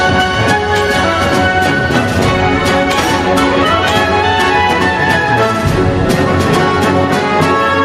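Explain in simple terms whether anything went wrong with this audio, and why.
Yes, something went wrong. The whole clip has gain pumping. The level swings up and down by a large amount, again and again. Loud and soft parts end up squeezed close together, so the sound feels flat and crushed. The likely cause is the input level set far too high, with a fast limiter pulling it back down on each loud moment.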